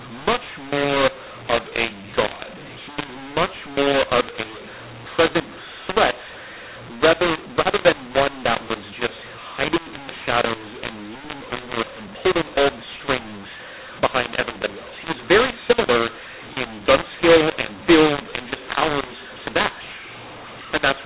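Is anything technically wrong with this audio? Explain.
Yes. Throughout the clip there is a mu-law and A-law mix-up. Speech coded as A-law is decoded as mu-law, which scrambles sample levels. The result is harsh, distorted speech with noise filling the pauses. The 8 kHz telephone coding itself keeps the band below 4 kHz.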